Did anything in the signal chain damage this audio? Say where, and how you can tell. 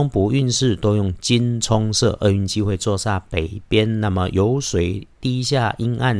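No, nothing in the signal chain damaged this audio.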